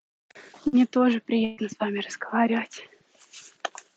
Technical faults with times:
0.67-0.76 burst of packet loss
1.45-1.60 burst of packet loss

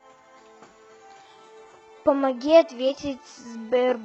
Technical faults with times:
1.25-4.05 adaptive stream at a lower bitrate

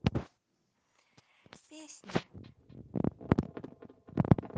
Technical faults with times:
2.44-4.57 feedback echo between two devices

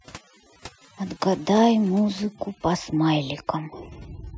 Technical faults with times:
0.00-4.37 overdone noise removal

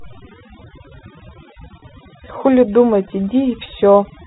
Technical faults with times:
0.00-4.27 overdone noise removal
1.80-1.82 packet loss with pitch repetition

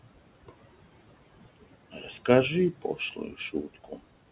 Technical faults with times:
0.00-4.31 noise suppressor artifacts
1.92-2.09 speech cut by the noise suppressor
2.72-4.01 speech cut by the noise suppressor

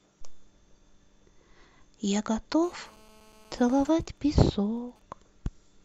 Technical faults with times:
2.63-3.90 GSM phone buzz
3.93-5.02 GSM signalling bursts

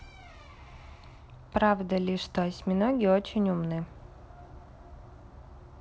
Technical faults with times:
none

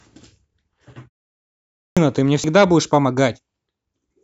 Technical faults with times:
1.65-1.97 clipped start after a pause

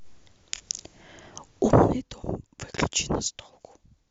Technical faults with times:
1.57-2.06 zipper noise

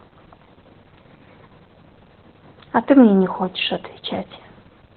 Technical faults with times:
0.00-4.96 Opus voice compression

